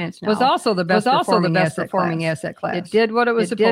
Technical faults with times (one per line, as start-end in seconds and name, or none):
0.00-3.71 doubled audio track